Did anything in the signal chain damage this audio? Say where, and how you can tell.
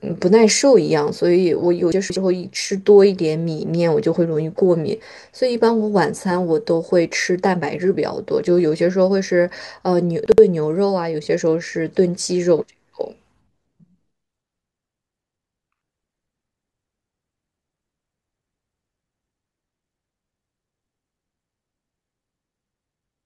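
Yes. The speech has chunks out of order at two points, a fault in the buffering stage where audio is assembled in 60 ms blocks. From 1.92 to 2.16 s one block plays three blocks late, and from 10.26 to 10.38 s one plays a single block late. Each spot sounds like a brief jumbled stutter. Nothing is missing, but the wrong sequence creates three hard discontinuities per event.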